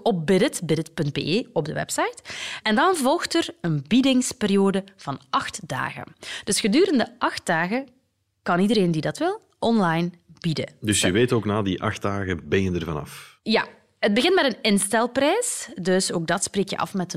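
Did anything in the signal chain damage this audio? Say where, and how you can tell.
No, nothing in the signal chain can be heard damaging this speech recording. At no point does any stage, from capture through to playback, leave an audible mark on the sound.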